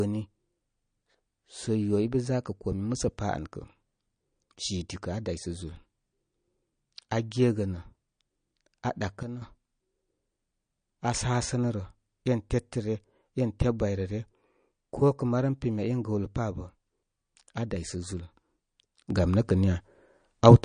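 MP3 compression runs throughout the speech: plainly audible watery, swirly artefacts and nothing above 9.6 kHz, which fits a low bitrate near 40 kbps starving the encoder of bits.

A sudden gain jump occurs from 9.23 to 9.42 s, when level and background noise drop together by about 9 dB, then return. Another jump at 19.10 s raises everything by about 9 dB until the end. Both likely come from a gain change applied instantly between samples, without a ramp.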